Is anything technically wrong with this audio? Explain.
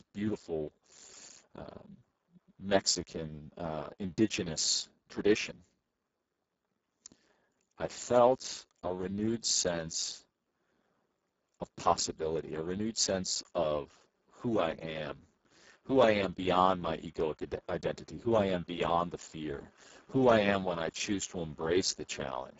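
Yes, the whole clip carries Speex codec damage, and it's heavy. Speex is a CELP speech coder, and here it's starved of bits for the excitation signal, so the speech comes out hoarse, noisy and edging toward robotic. That level of breakdown fits a very low setting, roughly 6 kbps. The top end stops at about 7.7 kHz, and what sits above 4 kHz is only a shaped, hissy fill rather than real detail.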